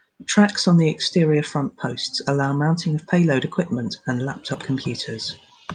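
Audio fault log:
No fault is logged for this clip.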